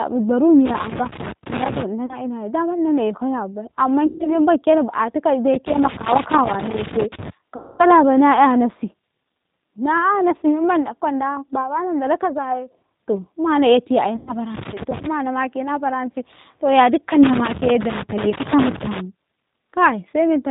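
Speech coded with the G.729 codec at 8 kbit/s: a spectrogram shows an empty band above 4 kHz, and the voice sounds rough and synthetic throughout. Loose connector crackle appears at 0.66–1.83 s, 5.54–7.30 s, 14.54–15.06 s and 17.23–19.00 s. It is a worn contact making and breaking, which shows as irregular, broadband vertical spikes. VoIP packet loss concealed by the speech codec falls at 2.06–2.19 s (just before "ina daman"), 4.07–4.39 s, 7.56–7.86 s and 14.16–14.36 s. The decoder stretches its last pitch into buzzy, fading sound, seen as smeared horizontal harmonics and a sagging waveform envelope.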